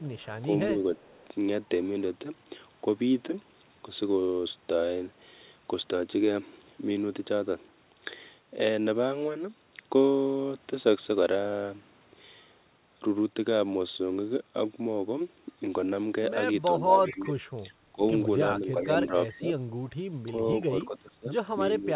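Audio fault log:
0.0–1.25 s, 17.07–17.26 s, 19.29–19.37 s: echo leak. A faint copy of the speech trails by 383 ms, about 30, 20 and 25 dB down. Likely an echo canceller passing loudspeaker pickup back.
0.03–0.77 s and 16.8 s to the end: speech suppressed in double talk. The speech dips in places, roughly 10 dB early and up to about 20 dB later. Likely the canceller ducking everything during overlap.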